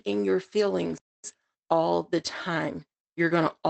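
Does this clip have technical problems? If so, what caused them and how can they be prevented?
Yes. Right after "in your", the speech cuts out at 0.98 s and stays silent until 1.24 s, a gap of about 0.26 s, before picking up where it left off. This is a playback stall: the player likely ran out of buffered audio or its playback thread was blocked, so nothing reached the output until it recovered. To prevent it, keep a larger playout buffer and run audio output on a high-priority thread that other work cannot block.

From 1.24 s to 2.96 s the speech sounds hurried, about 1.15 times normal speed, while the pitch stays the same. This is time-compressed catch-up: after the stall, the player works through its backlog by dropping small slices of audio and cross-fading across the joins, which produces the rushed pacing. Stopping the stalls removes the backlog, and setting a gentler maximum catch-up rate makes any remaining compression less audible.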